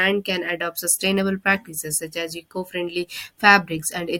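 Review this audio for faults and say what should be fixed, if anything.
Nothing needs fixing, because the speech signal holds steady throughout with no audible technical fault.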